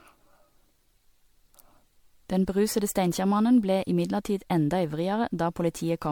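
Generation loss runs throughout: the speech sounds swirly, smeared and hollow, likely from around seven MP3 re-encodes, each requantising on a shifted frame grid.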